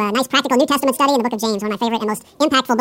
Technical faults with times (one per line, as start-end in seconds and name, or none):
0.00-2.81 audio read two samples at a time (double speed)